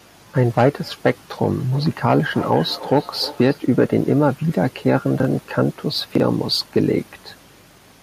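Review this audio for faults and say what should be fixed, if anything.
Feedback echo between two devices runs from 1.72 to 3.72 s. A second device in the room plays the call back, and this microphone picks it up again. Repeats come roughly every 0.3 s, at about -16 dB below the speech. Each pass sounds thinner and more ringing. To prevent it, mute or remove the second device, or use headphones on it.

Chunks out of order occur at 5.20 to 5.25 s and 6.15 to 6.20 s. In each, one 23.22 ms chunk plays one chunk late, after the audio that should follow it. Nothing is missing, but the hard joins cause a brief jumbled stutter. To prevent it, reorder chunks by sequence or timestamp before playback or writing.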